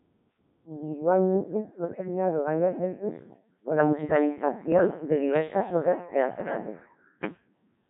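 Speech that has been through a Codec 2 vocoder throughout, and heavily: the voice is rebuilt from pitch, voicing and a coarse spectral envelope as sums of sine waves, so it sounds robotic and buzzy. That is unlike the smeared, swirly texture of an ordinary low-bitrate waveform codec, and the depth of damage fits a very low rate around 1.3 kbit/s. Bit errors on digital voice radio hit twice, at 1.85 to 2.08 s and 4.72 to 4.87 s, where the synthetic voice suddenly jumps in pitch, level and tone colour and turns into warbling gibberish. A packet dropout would leave gaps or repeats, but here corrupted frame parameters are still decoded, which points to an error rate of several percent.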